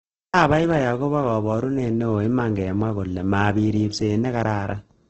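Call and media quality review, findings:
Likely Opus compression, CELT mode, wideband, bit-starved at a rate that fits about 12 kbps. Throughout: band energy kept, but starved bands are refilled with folded or noise content, so the speech turns rough, grainy and noisy. Nothing above 8.3 kHz.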